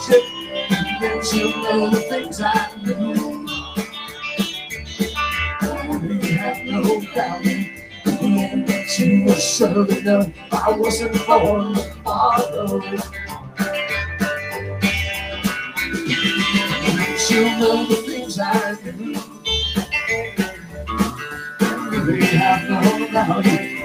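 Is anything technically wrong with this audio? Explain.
Yes. A noise suppressor meant for speech was applied to music or sounds throughout. It treats steady content as noise, so the level pumps by roughly 10 dB.

Sound cut by the noise suppressor occurs at 0.36–0.53 s, 2.68–2.84 s, 3.69–4.23 s, 7.65–8.06 s, 10.3–10.52 s, 12.82–13.6 s, 18.76–19.45 s and 20.56–20.78 s. Sustained portions sink by about 6 to 12 dB, deepest at 18.76 s, and sound briefly hollowed out.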